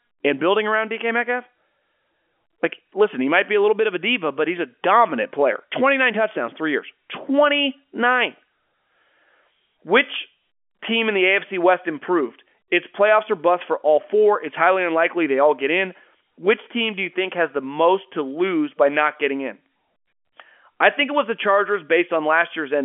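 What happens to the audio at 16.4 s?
Nothing goes wrong at 16.4 s: the speech carries on intact through that moment, with only the narrow telephone band of G.711 coding, nothing above about 3.7 kHz.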